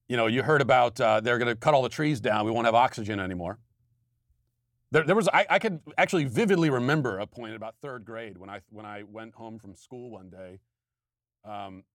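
From 6.92 to 7.59 s the speech level falls by about 15 dB in 2 dB steps, around fifteen per second, causing zipper noise. Each unsmoothed gain jump leaves a small click, so a fast ticking rides on the fade, unlike a smooth fader move.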